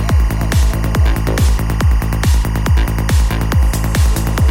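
Linear timecode running at 23.976 frames per second has leaked from a neighbouring line into the audio path for the whole clip. This timecode bleed lays a constant chirping warble, flipping between roughly 1 and 2 kHz, about 20 dB beneath the sound.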